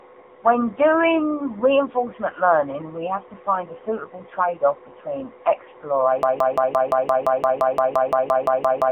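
Throughout, the speech carries the AMR narrowband mobile codec. The band runs from about 250 Hz to 3.6 kHz, with nothing above 3.8 kHz. The pulse-driven vocal-tract model leaves a plainly buzzy, synthetic quality, which fits a low rate near 8 kbps.

From 6.23 s to the end, a broken-record loop takes over. A 0.17 s fragment repeats back to back 16 times, stuttering mechanically. The speech that should have continued is lost, likely because the player or stream stalled and kept resending its last buffer.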